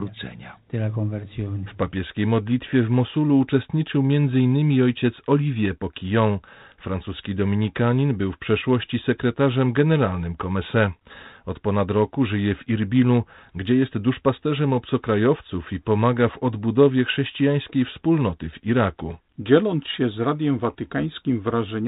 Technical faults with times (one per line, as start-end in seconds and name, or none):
none